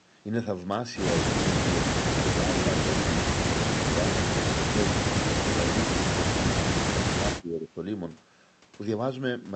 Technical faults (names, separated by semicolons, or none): speech suppressed in double talk